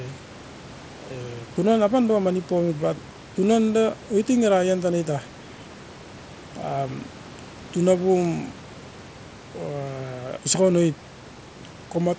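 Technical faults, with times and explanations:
No technical faults can be heard anywhere in this recording.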